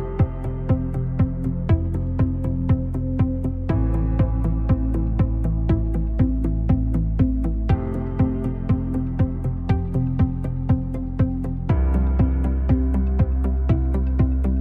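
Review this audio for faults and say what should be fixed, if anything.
Nothing in this audio needs to be fixed, as no faults can be heard.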